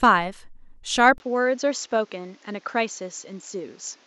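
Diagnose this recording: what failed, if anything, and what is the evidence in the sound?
Input switched to a poorer device at 1.18 s, likely at the driver or device-routing stage: after a 20 ms gap, the speech loses everything above 7.6 kHz, drops about 5 dB, and sits on a new noise floor about 35 dB below the speech, the signature of a narrower-band microphone taking over until the end.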